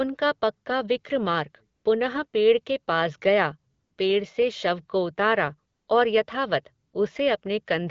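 Brief stretches of smooth, steady hiss replace the real background at 1.75–1.83, 2.27–2.33, 3.73–3.97, 5.73–5.87 and 6.87–6.93 s. This is AMR comfort noise: the sender judged these gaps silent and stopped sending speech frames, so the receiver synthesised filler noise. The wideband speech around them sounds clear.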